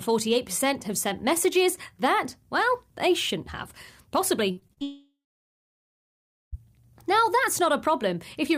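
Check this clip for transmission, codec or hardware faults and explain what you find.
Two transmission faults occur back to back in the speech.

From 4.51 to 4.83 s the audio turns choppy and robotic. This is repeated packet loss: five short gaps, the longest 55 ms, each patched by repeating the preceding sound.

From 4.83 to 6.55 s the sound smears into a fading buzz or hiss, then falls to about 1.35 s of silence before returning. The likely cause is a long network dropout, with roughly 1.7 s of audio never delivered.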